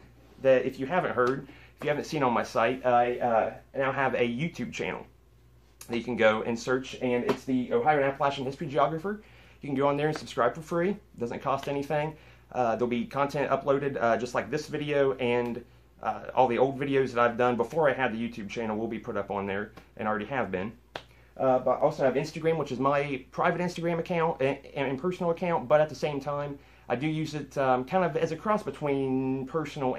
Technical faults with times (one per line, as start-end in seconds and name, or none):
9.77 dropped samples
21.81 dropped samples